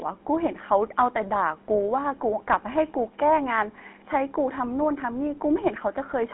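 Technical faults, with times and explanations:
Throughout, GSM full-rate codec: the whole thing has that buzzy, gravelly roughness you get when the vocal tract is modelled and driven by a sparse, regularly spaced pulse train. It sits in a phone band of roughly 200 Hz to 3.4 kHz, which fits the old 13 kbps GSM coder.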